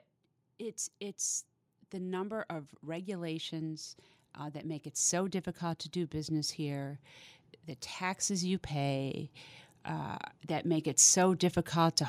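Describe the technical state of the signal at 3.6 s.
Automatic gain rising is under way at 3.6 s, near the end of a swell that runs from 0.58 s to 3.91 s. The gain control judged the incoming speech too quiet and pushed its amplification up slowly, about 6 dB in total over more than three seconds. Because the whole signal is scaled, the voice and the room noise behind it grow louder together, so at 3.6 s both sit close to their raised, final level.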